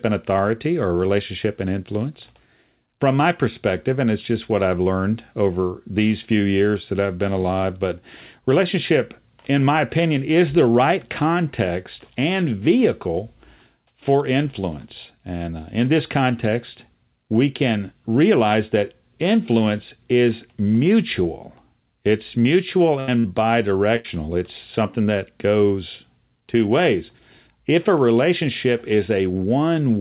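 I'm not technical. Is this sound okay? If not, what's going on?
No. Around 23.0, 23.2 and 23.96 seconds there is a burst of packet loss: small chunks of the call arrived late or not at all. The gaps last from about a twentieth to a tenth of a second. The system briefly stretches and fades the last sound to cover it, then skips ahead, so a little speech goes missing each time.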